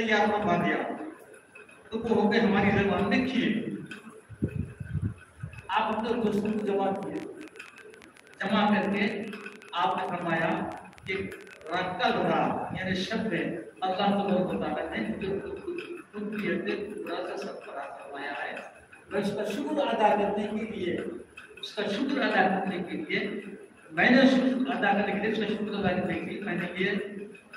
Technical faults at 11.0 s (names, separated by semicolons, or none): train of clicks